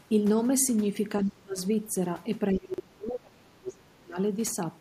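From 1.24 to 1.6 s, speech is suppressed in double talk. Likely the echo canceller, unable to separate talker from loudspeaker echo, turned everything down, dipping the speech by roughly 30 dB.

At about 1.26 to 1.3 s, the other side's voice leaks through. Echo cancellation probably left a residue, heard as a faint scrap around 30 dB below the speech.

From 2.52 to 4.17 s, speech is again suppressed in double talk, likely for the same reason. The level drops by roughly 35 dB in places across most of that stretch.

Inside it, at 2.74 to 2.8 s, chunks play out of order. A 20 ms chunk arrived two chunks late and plays after its successors, giving a brief jumbled moment with hard joins.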